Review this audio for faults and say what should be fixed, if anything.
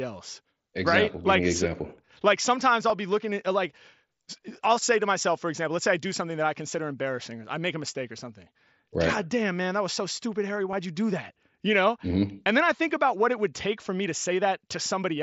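Concealed Bluetooth headset packet loss occurs at 2.89 s, a gap of about 7.5 ms, and at 10.71 s, about 15 ms, which fits one and then two lost headset frames. The receiver patched each gap by repeating the closest-matching stretch of recent waveform, so the single lost frame at 2.89 s is a nearly inaudible short glitch within the mSBC wideband audio. To prevent it, keep the headset close to the phone with a clear line of sight and reduce 2.4 GHz interference from Wi-Fi or other Bluetooth traffic.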